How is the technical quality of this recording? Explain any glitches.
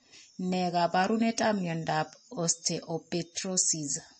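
The quality is poor, with compression damage running through the whole speech recording. The likely cause is MP3 compression at a starved bitrate, plausibly around 32 kbps. The encoder removes everything above 8.3 kHz and keeps dropping faint frequency lines, so the speech sounds dull, watery and swirling, with metallic chirps on s sounds and softened consonant attacks.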